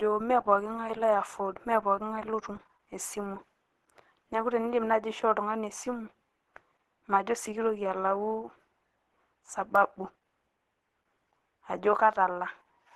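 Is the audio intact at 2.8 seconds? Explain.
No. At 2.8 seconds, as across the whole clip, the speech has a hoarse, grainy texture and nothing above 12.1 kHz, likely from Opus compression in its hybrid speech mode. Bands starved of bits are filled with noise, which fits a low bitrate near 16 kbps.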